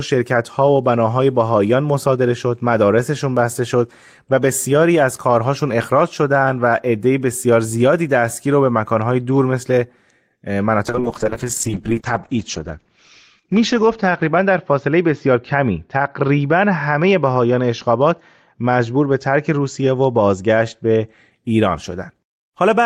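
Speech with a call bitrate drop from 10.87 to 21.37 s. The top end narrows from 20 kHz to 8 kHz and the sound turns watery and coarse, worst for about 2.8 s, which points to the encoder falling from roughly 32 to 8 kbps. Unlike packet loss, nothing drops out.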